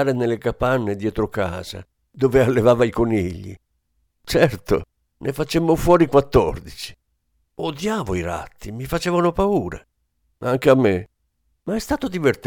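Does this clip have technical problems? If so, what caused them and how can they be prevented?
No, this clip has no technical problems, so there is nothing to trace back to a cause or to prevent.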